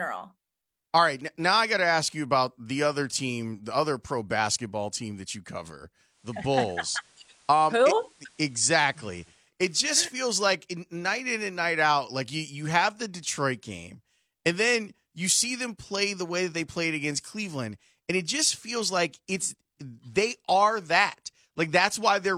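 Digital radio blending to analogue, 6.05 to 9.53 s, after "team that you cover": the receiver cross-fades to FM over 275 ms, adding faint hiss.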